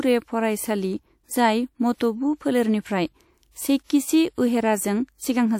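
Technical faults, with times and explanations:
1.94–2.00 s, pre-echo: a short hiss rises over about 57 ms just before "फोलेरनिफ्राय सेइकिचि". The transform block spreads its quantisation noise, scaled for the loud onset, back across the quiet gap ahead of it, so the attack arrives smeared and softened.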